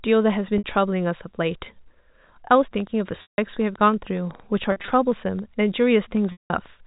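At 0.58 s, packet loss with pitch repetition bridges a 60 ms gap by replaying the last pitch period, giving a brief held, buzzy tone. From 2.80 to 6.67 s a train of clicks runs at about 6.2 per second, spaced irregularly, roughly thirty ticks peaking near the signal level and audible in pauses too, likely from interference or a faulty connection. Within that span the packet loss returns. At 3.22 s, 160 ms is lost and the repeated period fades toward silence before a short cross-fade back. At 4.72 s, losses scattered across 160 ms, none longer than 40 ms, produce several small buzzy stutters. At 6.32 s, a 180 ms gap fades out and then cross-fades back. Every gap fits 20 ms packets, all over a telephone band cut off at 4 kHz.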